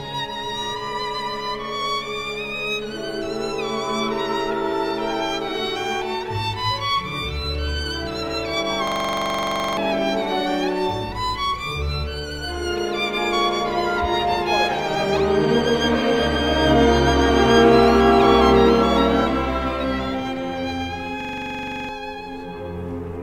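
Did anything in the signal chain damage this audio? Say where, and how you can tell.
Yes, a system hang loop at the driver/buffer stage, at 8.88–9.77 s and 21.21–21.89 s. One 42.67 ms slice repeats at 23.4 Hz as a rattling stutter, which fits a 2048-sample ring buffer. The waveform shows identical repeated blocks, and the spectrogram shows evenly spaced vertical stripes.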